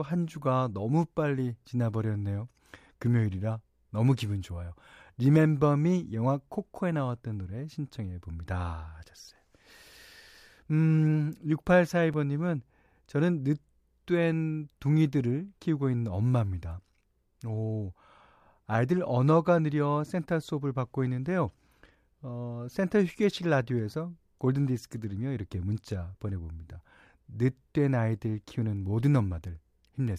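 A block of digital silence at 12.14 s: 5 ms of the speech is replaced by zeros, cutting out and back without fade, heard as a tick.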